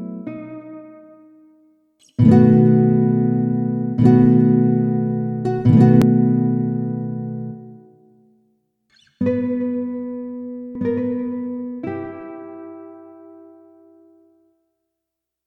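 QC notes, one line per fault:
6.02 s and 10.75 s: damaged data in a compressed stream. Each event is a single very brief glitch, a chirp, squawk, click or short hole that does not belong to the audio around it. Bytes in the encoded stream were wrong at these points. The decoder misread or refused the affected frames. It then had to resynchronise on the next valid frame before normal playback resumed.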